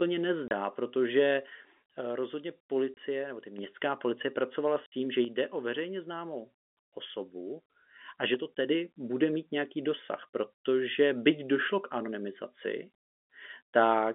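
Short dead gaps cut into the speech at 0.48 to 0.51 s, 2.94 to 2.97 s, and 4.86 to 4.92 s, the last falling between "policie pracovala" and "tím že". This is packet loss filled with silence: the first two 30 ms holes fit a single lost 30 ms packet, the 60 ms one two in a row, and the receiver inserted nothing, leaving hard edges. Beneath them the narrow G.711 telephone band carries through.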